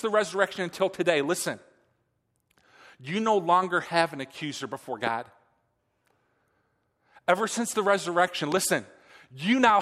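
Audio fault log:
5.07–5.09 s, loud pop: a single sharp pop lands on top of the speech, peaking a few dB above it, while the speech carries on underneath. This is likely a sudden voltage step, such as from a connector, switch or static discharge, that the following circuitry shapes into a brief pulse.
8.52–8.59 s, loud pop: two pops in quick succession, stronger at around 10 dB above the speech, with the same pulse-like character.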